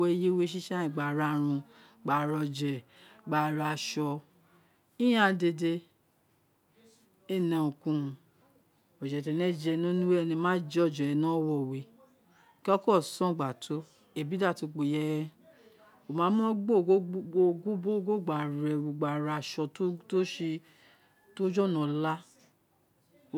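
Listening to the speech here, nothing stood out as a technical fault at any point.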